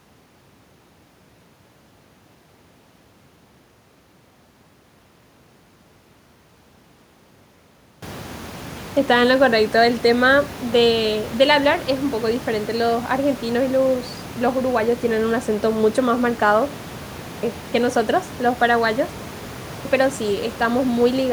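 Speech that resumes abruptly at 8.44 s, 17.11 s and 19.56 s, each time missing about 0.3 s of its opening: a clipped start after a pause, where the output device sleeps through silence and needs time to wake before sound passes. The room noise, which rises around 8 s, is part of the recording.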